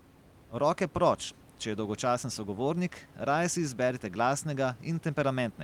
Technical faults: none

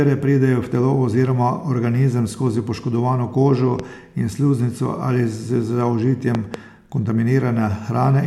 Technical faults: loud pop

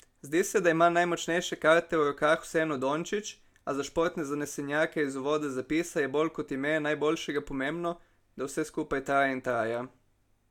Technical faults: none

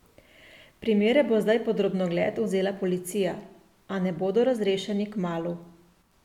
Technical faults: none

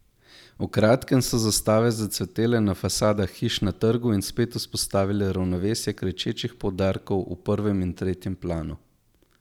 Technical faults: none

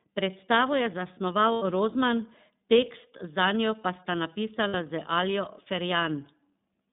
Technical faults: iLBC codec; lost iLBC frames

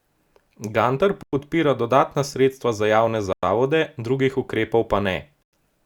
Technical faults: gap between chunks

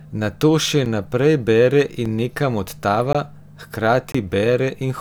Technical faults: block of digital silence

